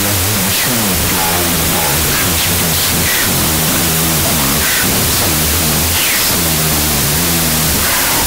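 Speech, buried throughout under loud noise from a wrong sample width. It plays at half speed and an octave low, which fits 32-bit float data read as 16-bit integers.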